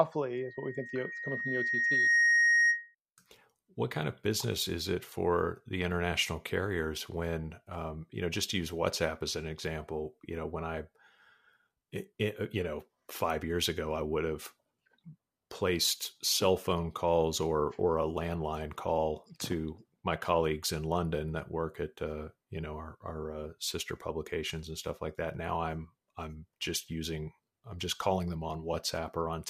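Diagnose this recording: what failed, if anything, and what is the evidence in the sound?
Loudspeaker feedback squeal, in the analogue sound-reinforcement loop. From 0.33 s to 2.95 s a single 1.9 kHz tone swells over about two seconds to roughly 10 dB above the speech. The microphone hears its own loudspeaker, and loop gain exceeds one at that frequency.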